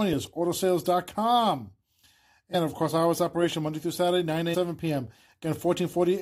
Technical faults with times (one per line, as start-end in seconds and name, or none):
2.53-2.55 damaged data in a compressed stream
4.53-4.55 damaged data in a compressed stream